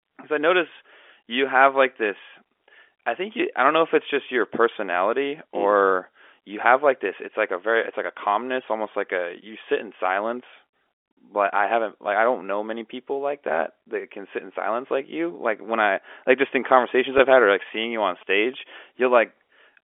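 It's a speech recording over a narrowband phone line. From 16.8 to 18.5 s you get GSM signalling bursts: a galloping dit-dit-dit of short 217 Hz buzzes, roughly 25 dB under the speech, from a nearby 2G phone whose radio bursts get rectified in the audio circuit. Early in that stretch, at 17.18 s, there's a packet loss with pitch repetition, a 10 ms gap the receiver patched by replaying the last pitch cycle, heard as a brief held buzz.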